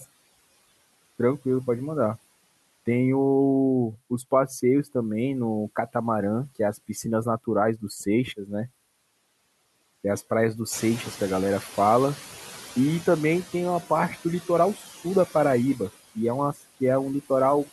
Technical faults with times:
0.00-17.72 noise suppressor artifacts
10.72-13.43 noise suppressor catching up
16.53-16.63 speech cut by the noise suppressor

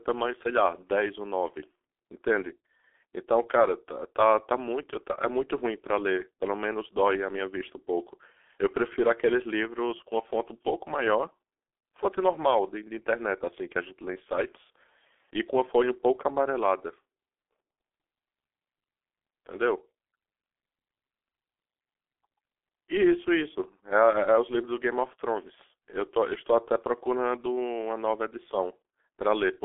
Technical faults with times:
0.00-29.64 G.723.1 codec

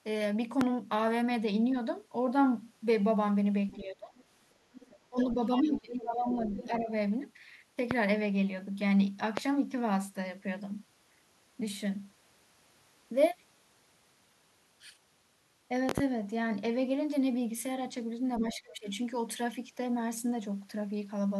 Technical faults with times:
0.61-0.65 loud pop
3.68-3.76 other side's voice leaking through
3.77-4.13 speech suppressed in double talk
4.16-4.24 other side's voice leaking through
4.74-6.67 other side's voice leaking through
5.10-6.89 speech suppressed in double talk
7.91-7.95 loud pop
9.37-9.41 loud pop
15.89-16.01 loud pop
18.39-18.52 other side's voice leaking through
18.40-18.88 speech suppressed in double talk

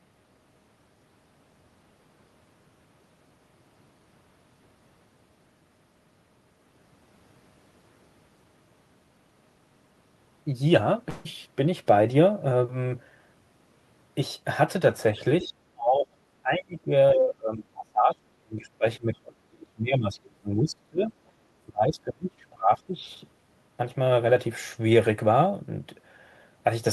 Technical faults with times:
11.09-11.27 long network dropout
15.41-21.12 speech suppressed in double talk
15.44-15.48 other side's voice leaking through
21.67-23.05 speech suppressed in double talk

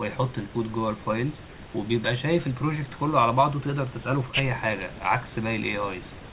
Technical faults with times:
none

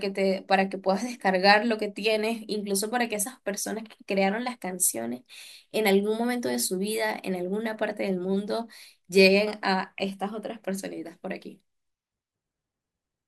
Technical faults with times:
none

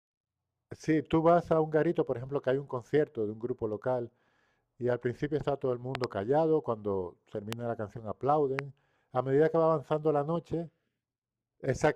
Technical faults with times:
5.95-6.06 loud pop
7.53-7.55 loud pop
8.59-8.61 loud pop

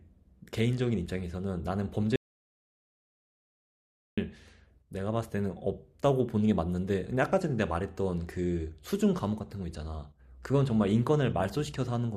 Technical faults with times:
2.16-4.17 audio dropout to silence

